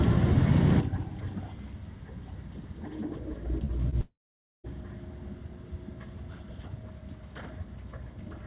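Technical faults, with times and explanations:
3.65–3.72 s and 3.90–3.95 s, short concealed packet loss: brief smears where about 30 ms went missing each time and the receiver extended the preceding sound to bridge the gap.
4.01–4.67 s, long network dropout: the sound turns into a fading continuation, then about half a second of silence before resuming, likely from roughly 630 ms of audio never arriving.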